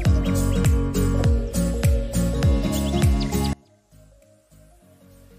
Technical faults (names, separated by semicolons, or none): one channel inverted